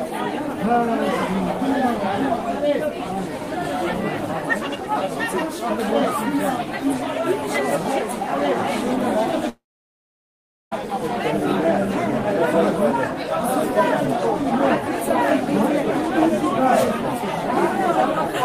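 At 9.49 s the sound smears into a brief fading buzz, then drops to silence for about 1.1 s before resuming at 10.73 s with roughly 1.2 s simply gone. This is a long network dropout, likely from packets that never arrived while the receiver concealed the gap.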